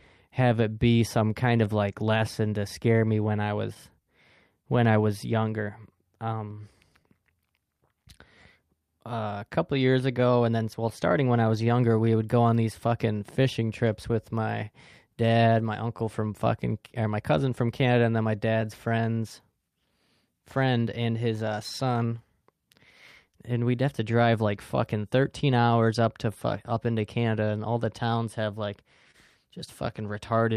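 A speech recording with a clock drift between sender and receiver: the sending side's clock runs slow, by roughly two percent, so the receiver's jitter buffer keeps draining and never settles. Unlike a single network stall, which produces one obvious break, the drift acts steadily across the whole recording, and its effects turn up as small irregular stumbles from start to finish rather than clustering in one place.

The repeated timing corrections run from 0.30 s to 30.39 s. To stay in step, the receiver keeps stretching the audio with small repeated pieces, always in the same direction. The result is playback at about 99% speed, with roughly half a second added overall. These edits are spaced unevenly. A constant resampling error would instead shift pitch smoothly with no hiccups at all.

Scattered short gaps fall in three stretches: 3.24 to 11.52 s, 15.29 to 18.64 s, and 21.50 to 29.16 s. 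Each is a handful of lost or late packets, individually tiny, the longest in each stretch between about 10 and 30 milliseconds. The receiver bridged each one by continuing the previous sound, so nothing drops to silence. What you hear are brief ticks or smears confined to these windows. The timing corrections, by contrast, are spread through the whole recording and show up as a drag on the rhythm rather than as momentary blurs.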